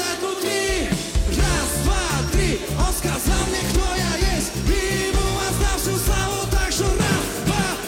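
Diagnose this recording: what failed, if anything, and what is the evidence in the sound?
Nothing failed; no fault can be heard here.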